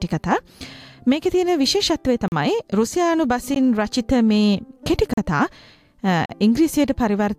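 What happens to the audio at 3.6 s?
At 3.55 s there is a block of digital silence about 15 ms long. A run of samples drops straight to silence and then returns, with no fade either way. The sound cuts out briefly and comes straight back.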